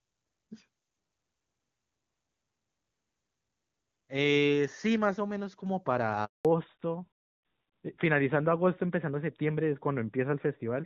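At 6.25 s the speech cuts out completely for 200 ms, until 6.45 s. This is a handover gap: while the call was being passed from one network link to another, no speech frames got through, so the sound falls away within a few tens of milliseconds and stays silent until the new link carries audio again. A packet-loss concealment glitch would fill the gap with smeared or repeated sound. This is a clean, dead hole.

From 6.45 s to the end, the speech is a fallback to narrowband. Before the switch, the call was running on the AMR wideband (HD Voice) codec, which is clear and shows little or no coding damage, consistent with its top rate of 23.85 kbit/s. After the switch, nothing above 4 kHz remains, which points to the AMR-NB codec at around 12.2 kbit/s. The sibilants lose their crispness and the sound turns duller and rougher. This is a lasting change in bandwidth, not a dropout, and it differs from a low wideband bitrate because everything above 4 kHz is gone entirely, not merely grainy.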